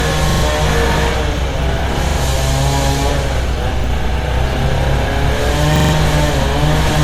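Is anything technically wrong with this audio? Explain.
Yes, two things are going on.

The whole clip has generation loss. It sounds swirly and hollow, transients are smeared, and there's nothing above about 19.8 kHz. That's worse than a single 96 kbit/s MP3 pass would give you, so it was likely decoded and re-encoded as MP3 something like seven times. Each pass requantises on a shifted frame grid, so the noise and spectral holes build up.

There are also four repeated-buffer stutters. From 0.30 to 0.43 s one slice plays about three extra times. From 2.09 to 2.18 s it's twice, at 3.80 to 3.84 s once, and from 5.76 to 5.93 s about four times. Each slice is roughly 43 ms, which fits a 2048-sample buffer. New audio didn't arrive in time, so the device replayed the last chunk, and you hear hard joins at each repeat. Around 100 to 150 ms of real audio goes missing at the longer stutters.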